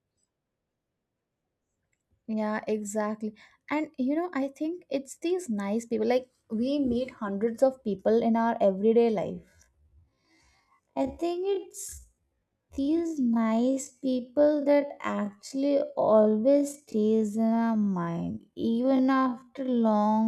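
At 9.25 s the speech turns into a time-stretched section that lasts until the end at 20.28 s. Software likely stretched this part to fill a longer slot, slowing it to half speed (0.5x) and holding the pitch steady by repeating short slices of the waveform. The pace drops abruptly while the pitch stays the same, and the slowed speech drags, leaving a drawn-out quality.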